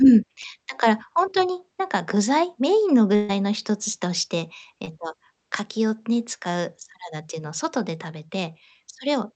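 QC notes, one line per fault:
0.41–0.45 s, 4.85–4.89 s, 8.27–8.31 s: short concealed packet loss. About 20 ms never arrived, so the decoder stretched the previous sound over the hole, leaving a quick smear or wobble.
3.15–3.31 s: burst of packet loss. Roughly 140 ms dropped out, the receiver held and faded the last sound across it, then jumped ahead with that stretch gone.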